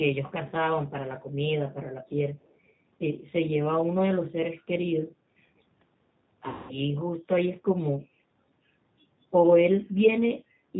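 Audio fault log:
throughout: G.729 codec, speech rebuilt at 8 kbit/s from filter, pitch and pulse parameters, giving a rough synthetic texture and nothing above 4 kHz, unlike simple low-pass muffling.
6.49–6.76 s: VoIP packet loss concealed by the speech codec. About 200 ms is lost and bridged by stretched, fading sound extrapolated from the last speech rather than a silent gap.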